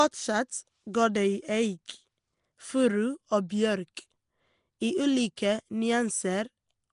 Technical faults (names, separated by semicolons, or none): Nellymoser compression; pre-echo